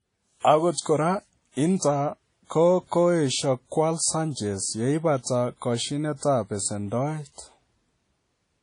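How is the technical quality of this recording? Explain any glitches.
The technical quality is noticeably degraded by lossy compression that runs through the whole speech clip. The damage is plainly audible from start to finish rather than appearing as isolated glitches.

Throughout, the audio has the ringing, washy texture of WMA compression, likely from an early WMA encoder at a low bitrate, which fits a rate around 32 kbps. The codec works on long transform blocks, so its quantisation noise smears across tens of milliseconds. That smearing produces the watery ringing, along with a hiss that swells and fades with the speech. On a spectrogram, everything stops sharply at 10.1 kHz. Below that, weaker detail shows as patchy, blocky gaps where faint components were zeroed.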